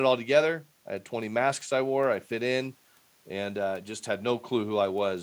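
Nothing in this recording jumps out as a technical fault; it simply runs its course with nothing to flag along the way.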